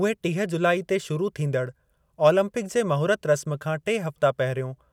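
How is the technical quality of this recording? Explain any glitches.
No technical faults are audible anywhere in the recording, so there are no glitches to explain.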